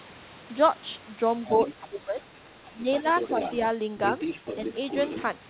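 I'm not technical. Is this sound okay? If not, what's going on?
No. The other side's voice leaking through is a second person heard under the speech at 1.45–1.74, 2.65–2.72, 2.93–3.56 and 4.06–5.23 s, likely from their loudspeaker echo. Speech suppressed in double talk is different: the main speech itself dips at 1.80–2.27 and 2.72–2.85 s, likely because both people talked at once.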